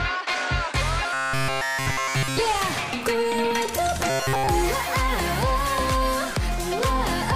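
From 1.13 to 2.39 s, and again from 4.10 to 4.47 s, the sound turns into a rigid, metallic buzz fixed at 133 Hz: robotic sound from repeated short buffers. The likely cause is audio arriving too seldom, so a fragment of about 7.5 ms is looped in place of essentially all of the real signal. Unlike a stutter or dropout, nothing falls silent; the steady buzz stays locked at one pitch while the sound underneath still roughly follows its shape.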